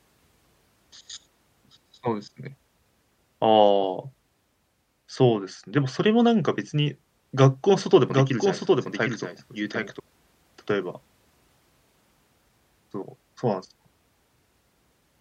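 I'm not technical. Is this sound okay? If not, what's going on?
No. From 8.10 to 10.0 seconds there is a doubled audio track. The speech plays twice, with a quieter copy about 0.7 seconds behind. The echo starts and stops suddenly. Most likely, a second, slower recording path was mixed in.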